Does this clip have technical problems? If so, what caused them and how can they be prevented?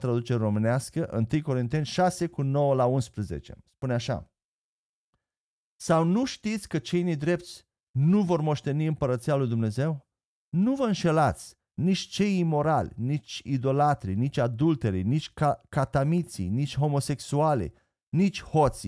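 No, no technical faults heard.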